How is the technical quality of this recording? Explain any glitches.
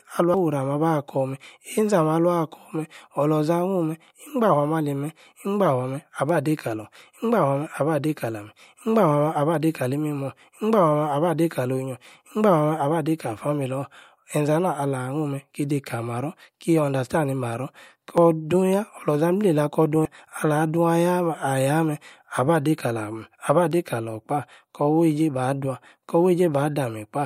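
The speech has three audible skips, at 0.34 s, 18.18 s and 20.05 s, each a sudden jump forward. The likely cause is a dropped buffer (overrun): audio was overwritten before being read, so the two sides butt together. Unlike a dropout, no silent gap appears. Roughly a tenth of a second vanishes at the first two, and about 0.3 s at 20.05 s.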